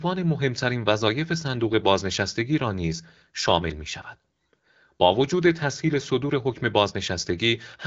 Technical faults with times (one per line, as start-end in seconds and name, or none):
none